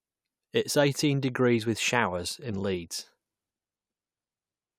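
There are no technical faults to describe in this speech recording.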